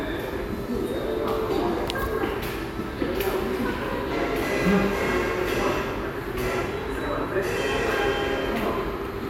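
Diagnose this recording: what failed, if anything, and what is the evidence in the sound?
Nothing failed; no faults heard.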